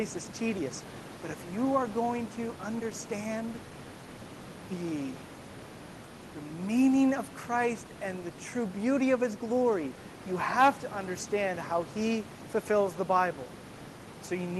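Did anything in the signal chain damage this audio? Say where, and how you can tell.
No damage anywhere in the chain.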